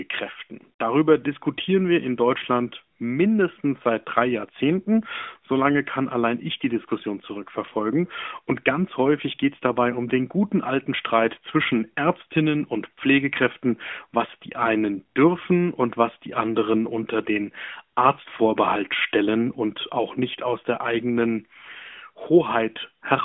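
Speech recording, with no technical faults to report.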